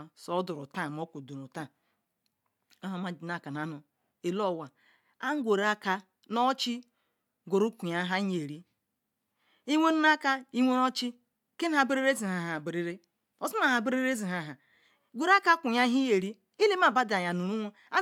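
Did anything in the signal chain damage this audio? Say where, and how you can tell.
No, nothing in the chain from capture to playback audibly damages this speech at any point.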